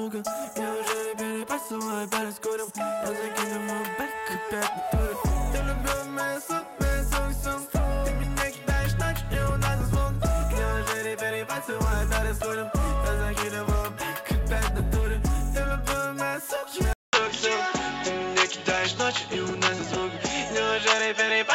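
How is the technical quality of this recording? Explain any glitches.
There is one clear glitch. At 16.93 s the audio drops out for 200 ms, then continues to the end through what is likely a poorer input device. Nothing above 7.6 kHz survives, so it turns dull. A new noise floor appears, roughly 30 dB down. Level stays about the same.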